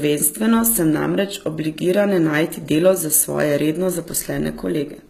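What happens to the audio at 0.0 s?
From the first moment and throughout, the treble sounds rebuilt rather than cut, likely HE-AAC compression at around 20 kbps: copied upper bands give s sounds a gritty, lispy edge up to 14.9 kHz.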